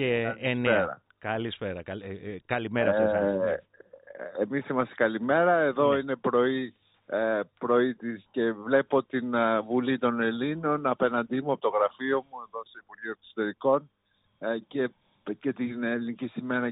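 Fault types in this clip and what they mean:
No technical faults are audible anywhere in the signal, with the level, continuity and frequency balance holding steady throughout.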